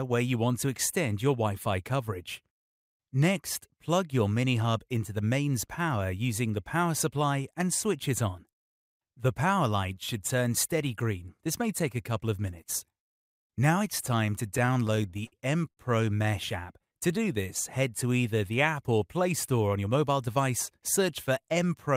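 From 14.57 to 15.34 s you get repeated stalls, a proper stutter: packets kept turning up late, the jitter buffer ran dry ten times, and the receiver held the last sound through each gap, the longest about 58 ms, so roughly a fifth of that stretch drags and hiccups.

Right after, at 15.70 s, there's a short stall from a late packet. One packet simply wasn't there on time, so the last sound gets stretched by about 72 ms before carrying on from where it left off. You hear it as a held moment with a faint buzz or dip.

Between 16.80 and 17.43 s there's a jitter buffer slow-down. The buffer was running low or had just raised its target delay, so the receiver repeated tiny pitch-period chunks to build up a reserve, adding about 77 ms. The audio plays at about 89% speed, drawn out but at the same pitch.

Then from 19.76 to 20.39 s the opposite happens, a jitter buffer speed-up. Too much audio had piled up, so the receiver trimmed out short pitch-period pieces, roughly 70 ms in all, running things at about 110% speed. 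It comes across as hurried, with the pitch unchanged.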